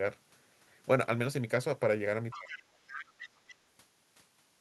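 From 2.31 to 2.63 s a second, fainter voice sits under the speech at about 15 dB below it: the other side's voice leaking through, likely because the talker's loudspeaker output reached the microphone and the echo canceller left a residue. It is a separate voice, not a smeared copy of the talker, which tells it apart from reverberation. It returns from 2.87 to 3.29 s at a similar level and briefly from 3.47 to 3.55 s, much quieter at about 25 dB down.

Overlapping the first stretch, from 2.35 to 2.71 s, the talker's own speech drops sharply, by up to about 25 dB, and is affected over roughly 300 ms in total. This is speech suppressed in double talk, likely caused by the canceller turning everything down while both sides spoke at once. Unlike a network dropout, the loss coincides with the other voice and leaves it partly audible rather than silencing everything.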